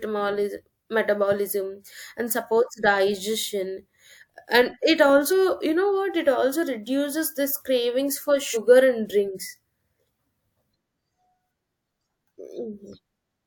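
Compressed frames skipped at 5.29 to 5.33 s and again at 8.53 to 8.57 s: the decoder never played whole blocks of the encoded speech, either lost from the file or rejected as corrupt. The first jump cuts out about 40 ms, which fits a single 42.7 ms frame. The second cuts about 100 ms, roughly two frames' worth. At each join the speech lurches forward slightly.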